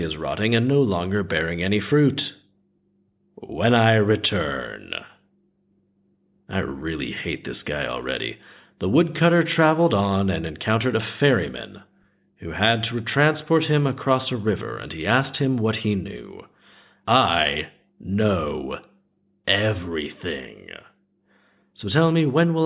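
No audible faults: the speech runs without dropouts, clicks, distortion or glitches anywhere in the recording.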